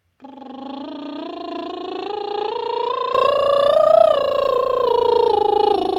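From the start until 3.15 s the music sounds dull and boxy, with nothing above 7.4 kHz, roughly 10 dB quieter, and carrying a faint new noise floor. It then opens up with no gap, so the input was likely switched to a poorer device.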